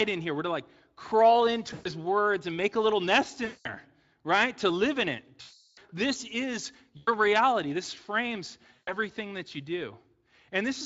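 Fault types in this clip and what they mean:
VoIP packet loss concealed by the speech codec, at 1.73 to 1.90 s, 3.45 to 3.69 s after "make a little nest", 5.41 to 5.79 s, 6.97 to 7.09 s after "this is", and 8.73 to 8.93 s before "that you": packets went missing, and the Speex decoder filled each gap by repeating its last pitch and spectral shape at falling gain. The sound smears into a fading buzz or coloured noise, longest in the 360 ms gap, and stays weak or distorted just after packets resume.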